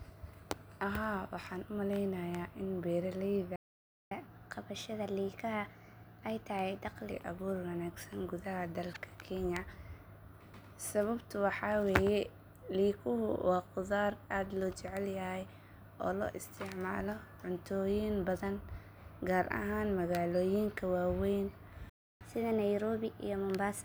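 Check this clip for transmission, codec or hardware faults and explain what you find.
The speech contains two playback stalls, each followed by catch-up at higher speed.

Playback stall, 3.56 to 4.11 s and 21.89 to 22.21 s: the player was likely starved of data or blocked, so output halted. The speech cuts to silence for about 0.55 s, then again for about 0.31 s right after "gar ahaan magaloyinka waweyn".

Catch-up at higher speed, 4.11 to 7.11 s and 22.21 s to the end: the player resampled its backlog at 1.1 times speed to recover the lost time. Delivery turns hurried and pitch rises about a semitone and a half, the first burst settling just before "abuur wanaagsan".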